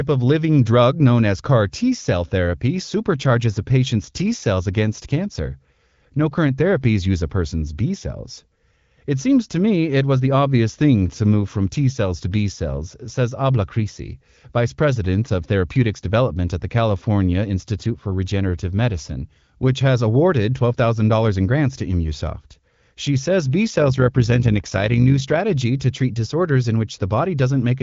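From 23.7 to 25.39 s, the speech was split into windowed frames and rejoined with an overlap whose windows don't add up to a steady gain. That is overlap-add ripple. The level swells and dips by about 6 dB once per frame, around 50 times a second, giving a fast, buzzy flutter like a rough tremolo. Underneath, the band-limited sound of the AMR wideband (HD Voice) codec, with nothing above about 7.3 kHz, continues throughout.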